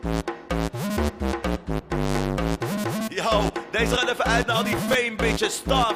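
From 4.66 to 4.94 s, a burst of processor overload crackle tears through the sound. The processor missed a string of deadlines in a row. Each missed buffer repeated a sliver of old audio with hard edges. The gritty bursts point to buffers of around 5 ms.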